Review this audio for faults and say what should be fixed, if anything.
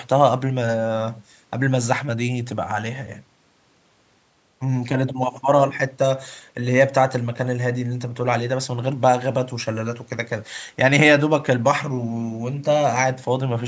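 Nothing here needs fixing; no faults were found.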